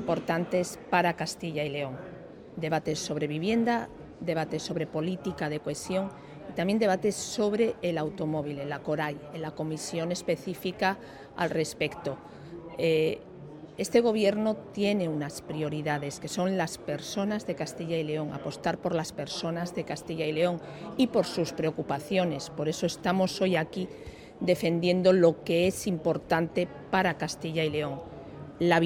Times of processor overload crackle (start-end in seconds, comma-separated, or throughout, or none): none